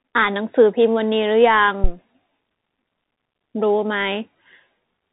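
Bluetooth CVSD headset codec, throughout the speech: each sample is reduced to a single up-or-down step of adapting size, and nothing above 4 kHz survives. The damage is plainly audible: s sounds turn scratchy, loud bright moments distort, and granular hiss sits underneath, which fits a 64 kbps narrowband link.

Phantom power thump, from 1.84 to 1.92 s: a supply switched on or off on the live input drove a voltage step through the coupling capacitors, producing a short, deep thump that dies away within 18 ms.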